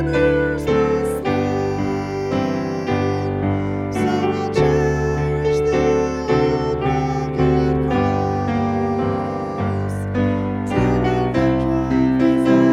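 At 4.63 s there is a brief burst of DAB burbling, a short patch of burbling noise laid over the sound. Weak reception let a small fraction of bit errors, around 0.15 percent, slip past error correction into the MP2 data, corrupting the audio in isolated sub-bands. The spread suggests three frames were hit. A spectrogram would show disjointed, blocky patches of energy in narrow bands, and the waveform a small, ragged level flicker.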